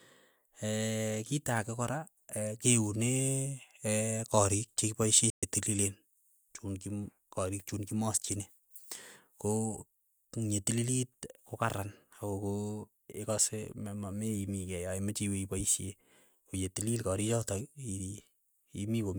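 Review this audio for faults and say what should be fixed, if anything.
A playback stall cuts the speech to silence from 5.30 to 5.43 s, lasting 124 ms. The player likely ran out of data or its thread was blocked. A deeper playback buffer and a higher-priority audio thread would prevent it.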